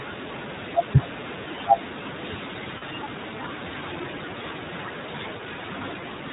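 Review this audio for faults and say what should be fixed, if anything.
The whole recording sounds band-limited and slightly rough and synthetic, with nothing above 4 kHz. That is the iLBC codec at work. It codes each frame's excitation independently, and the plainly audible damage fits its 15.2 kbps, 20 ms frame mode. Capturing or sending the audio with a wideband codec at a higher bitrate would prevent this.

At 2.78–2.83 s and again at 5.38–5.41 s, the sound briefly turns into a held, buzzy vowel. These are lost iLBC frames. The decoder repeated the last pitch cycle mixed with noise, which fits about two lost frames and then one, and recovery is immediate. A steadier network path, or jitter buffering with redundancy or FEC, would prevent these gaps.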